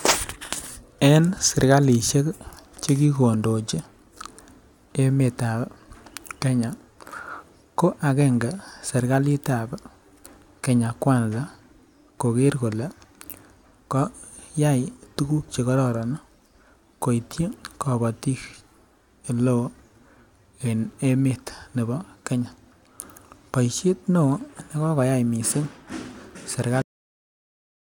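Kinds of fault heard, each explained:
Cut-off end: the speech just stops dead at about 26.82 s, mid-sound, with no natural tail or decay. The last stretch of audio was never written out, so the remaining second or so of the clip is flat digital silence.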